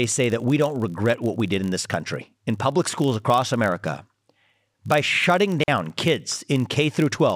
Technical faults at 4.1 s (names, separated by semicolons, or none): filter restarted on every block